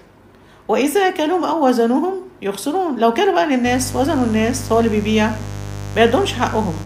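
Mains buzz starts at 3.63 s and runs to the end: a steady, raspy buzz fairly close in level to the sound itself. Sharp switching spikes from a dimmer, rectifier or unshielded path arrive twice per 50 Hz cycle, spraying harmonics up into the kilohertz range.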